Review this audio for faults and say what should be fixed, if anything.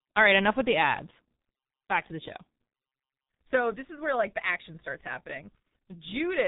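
The speech is muffled and hoarse from start to finish, with consonants smeared together and no brightness at all: nothing reaches above 3.8 kHz. This is heavy G.723.1 codec damage. The coder squeezes each 30 ms frame into a very small budget, which fits a rate of about 6 kbit/s, and its voice model updates too slowly to follow quick consonant changes. To fix it, carry the speech over a wideband codec at a higher bitrate instead of G.723.1.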